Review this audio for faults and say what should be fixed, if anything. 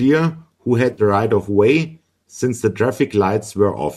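Between 0.93 and 1.02 s the speech has a brief smeared, noisy and phasey patch about 50 ms long. This is AAC frame loss with concealment. A run of consecutive frames, consistent with about five frames of roughly 10 ms each, failed to arrive. The decoder bridged the gap by reusing the last good spectrum with randomised phase, which gives the patch its blurred texture. Everything around the gap carries the light low-delay AAC compression that is likely in use, which is AAC-ELD at 64 kbps. To prevent this, add forward error correction or a modest jitter buffer with retransmission so lost frames are recovered before decoding.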